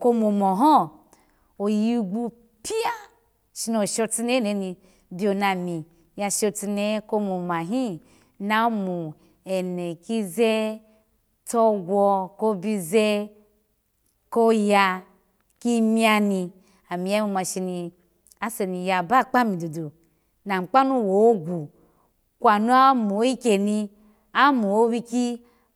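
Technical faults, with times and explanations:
No technical faults can be heard anywhere in the speech recording, and its signal keeps a steady, continuous technical state from the first moment to the last.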